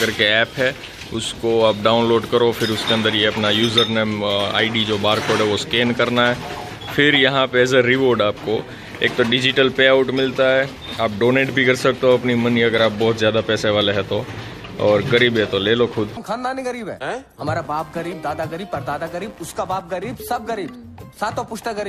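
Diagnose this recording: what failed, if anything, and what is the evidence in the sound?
Buzzy chirping near 100 Hz, about 30 dB down, from 17.51 s to the end: computer activity noise, computer load shifting the analogue ground.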